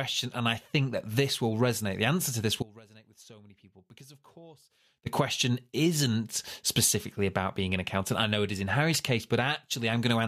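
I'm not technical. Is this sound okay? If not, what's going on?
No. The signal path likely lost the speech for about 2.4 seconds, causing an audio dropout to a faint residue: after "answer to this," 2.63 to 5.06 s holds only faint sound, much quieter than the speech, until "question isn't specifically about."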